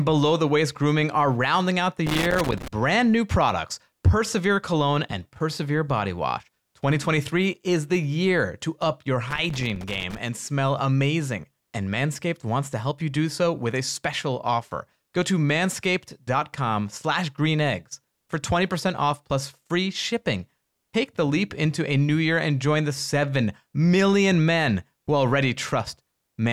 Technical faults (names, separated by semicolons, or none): loose connector crackle